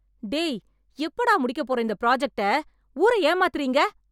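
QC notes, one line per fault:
Nothing to flag here; the speech came through without any technical problems worth a QC line.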